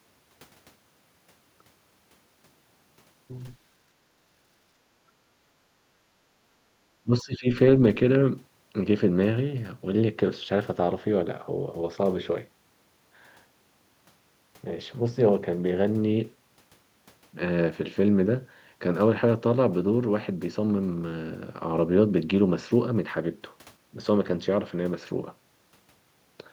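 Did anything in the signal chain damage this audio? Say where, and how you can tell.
Yes. From 7.03 to 7.47 s the speech sinks, dropping by roughly 20 dB at its deepest, then recovers. The audio is turned down for under half a second. The likely cause is speech suppressed in double talk at the call-processing stage. With both ends talking at once, the echo canceller cannot tell this talker apart from loudspeaker echo, so its suppressor turns down the near-end signal too, briefly ducking it.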